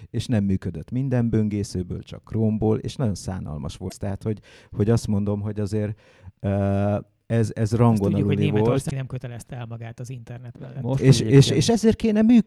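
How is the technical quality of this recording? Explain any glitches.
Two brief glitches mar the recording. At 3.85–3.92 s and 8.87–8.93 s, damaged data in the compressed stream makes the decoder misread frames and lose sync, producing a brief chirp, squawk, click or short hole in the sound.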